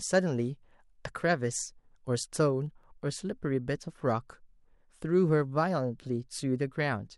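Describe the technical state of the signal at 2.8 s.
At 2.84 s there is an overlap between stream segments. Two segments claimed the same stretch of time, so the player trimmed about 15 ms of speech that was never duplicated. The waveform jumps across the gap, heard as a tiny skip.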